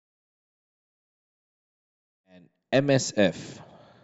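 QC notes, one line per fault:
Nothing to flag here, just a gentle editor-style fade-in on the speech that starts around 2 s and reaches full level by 3.21 s with no click or hard edge.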